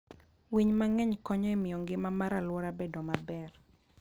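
A filter restarted on every block, dropping its state each time, throughout the speech, so every 20 ms block opens with a small transient, a 50 Hz buzz that tracks loudness.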